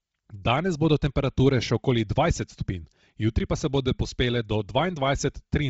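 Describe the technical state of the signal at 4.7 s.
Bluetooth LC3 compression is present at 4.7 s, as it is throughout the clip. The speech is cut off sharply above 7.7 kHz, with a breathy, grainy edge where the upper band has been thinned and replaced with noise. The likely cause is heavy LC3 coding, which discards much of the high spectrum at low bitrates and fills the gaps with synthetic noise. This would fit a rate of around 24 kbps with 7.5 ms frames.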